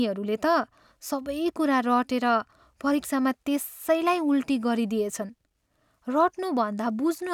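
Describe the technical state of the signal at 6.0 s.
At 6.0 s the speech signal is intact, with no audible fault at that moment.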